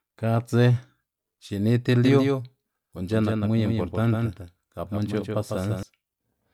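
From 2.05 s, just after "xini ti", the speech takes on a hard, flat echo: a second copy trails each syllable by roughly 150 ms, about 5 dB quieter, with no reverberant tail or room colour. It cuts in and out abruptly, ending at 5.83 s. This doubled audio track is likely caused by the same signal being captured twice, once through a slower path, so both copies are mixed together out of step.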